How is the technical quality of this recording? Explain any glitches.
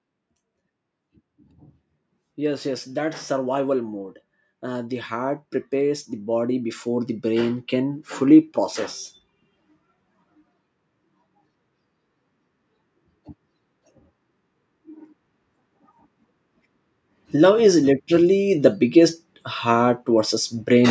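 The recording has two episodes of automatic gain rising; the call microphone processing behind it caps the sound at 8 kHz and thins the lowest bass as expected. From 4.61 to 8.53 s, and again from 17.31 to 20.86 s, the gain control judges the input too quiet and steadily lifts its gain by about 6 dB over several seconds. Speech and background noise swell together as a slow ramp. Compressor pumping would instead duck and release quickly with each loud syllable.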